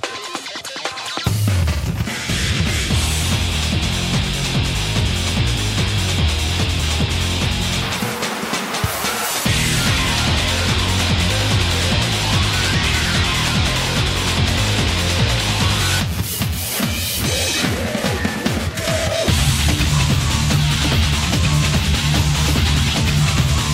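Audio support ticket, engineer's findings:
No faults heard anywhere in the clip, so there's nothing to chase on this one and the ticket can be closed out.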